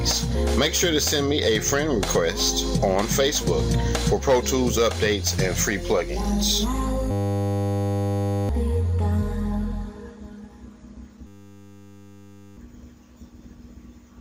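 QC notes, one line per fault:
Throughout, gain pumping: the level swings about 10 dB, pulling loud and soft parts closer together, likely a fast limiter fighting gain set far too high.
7.11–8.49 s and 11.27–12.57 s, system hang loop: a single 10 ms slice repeats at 100 Hz, giving a steady buzz, with about a second and a half lost each time.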